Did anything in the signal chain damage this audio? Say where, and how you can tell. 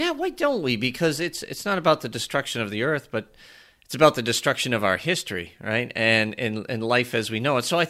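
No, nothing audible in this speech points to damage at any stage of the chain.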